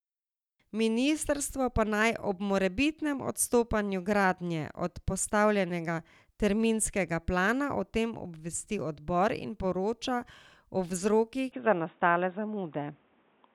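From 11.52 s the speech turns abruptly dull and boxy, with nothing above 3.8 kHz and a small shift in level and noise, likely from the input switching to a poorer device.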